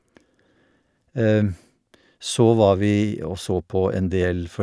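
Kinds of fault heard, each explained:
No kinds of fault are heard in this speech clip.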